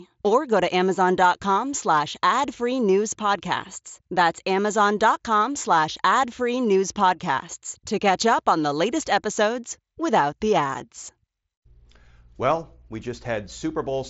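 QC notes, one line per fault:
No faults heard anywhere in this speech recording.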